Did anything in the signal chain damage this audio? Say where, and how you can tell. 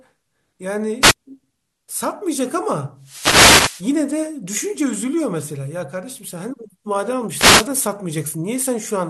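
Yes: wireless microphone noise hits at 1.01–1.14, 2.99–3.91 and 7.32–7.69 s. The FM radio link fades, so receiver static bursts over the speech.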